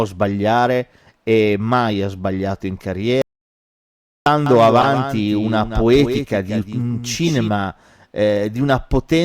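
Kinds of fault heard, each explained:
Audio dropout to silence: The speech cuts off just after "mai ha sbagliato in" at 3.22 s and returns at 4.26 s. About 1.04 s is missing. The gap is silent with no room tone, so nothing from that stretch survives. The likely cause is that the input was lost for a moment, through a dropped device, a broken link or an accidental mute, while the recorder kept writing silence.
Doubled audio track: From 4.46 s to 7.48 s a second copy of the speech runs underneath the first. It lags by about a fifth of a second and sits roughly 10 dB lower. The copy is full-band and dry, with no reverb tail. It switches on and off abruptly at both ends. The likely cause is the same signal being captured again through a slower path, or an edit that left two misaligned copies in the mix.
Corrupt frame decoded: Two short glitches occur, one from 4.81 to 4.86 s and one from 7.27 to 7.30 s. 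Each spans a couple of codec frames. Damaged bits in a compressed frame were decoded anyway, so the gains or codes were misread and energy landed at the wrong frequencies. The result is a brief chirp, squeak, blip or burst of noise that cuts across the speech for the length of the damaged frames.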